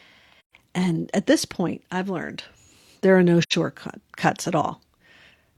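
AAC frame loss with muting: the decoder lost frames and zeroed their spectrum, so the overlapping windows fade the sound out and back in. A soft-edged 0.13 s hole, which fits three lost frames, opens at 0.40 s. A 0.11 s hole follows "learned there are no" at 3.42 s.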